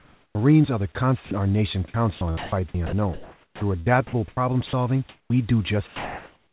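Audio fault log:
0.00–0.35 s and 5.09–5.30 s, comfort noise in place of the background: the sender likely stopped transmitting during these pauses, so the receiver substituted synthetic noise for the room. The real background becomes a flat, featureless hiss, about 11 dB and about 12 dB quieter respectively.
0.32 s and 5.25–5.30 s, onset clipped by the voice detector: the detector was likely slow to register that speech had resumed, so the first 30 ms and then 50 ms were never sent. Speech enters abruptly out of the comfort noise, missing its soft start.
1.25–1.31 s, 4.67–4.73 s and 5.87 s to the end, sound dropped by the voice detector: the detector likely mistook speech for background and stopped sending. Between "are the" and "our nation", and near 4.7 s, 60 ms is lost. At the end, steady noise replaces the final trailing speech.
1.88–4.37 s, sound chopped by the voice detector: after "our nation" the detector likely toggled repeatedly between sending and silence, replacing roughly 1.1 s with comfort noise. 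The speech sounds choppy, over a call path band-limited to 4 kHz.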